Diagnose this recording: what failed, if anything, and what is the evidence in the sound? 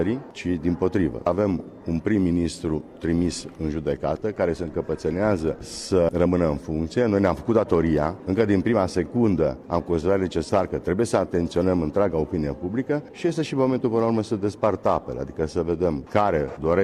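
Nothing failed in this recording, and the sound gives no evidence of any fault.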